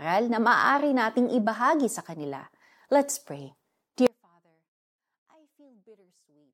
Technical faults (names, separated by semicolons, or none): audio dropout to a faint residue